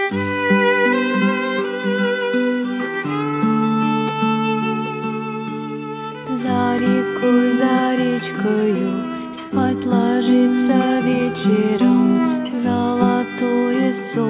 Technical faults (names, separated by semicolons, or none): none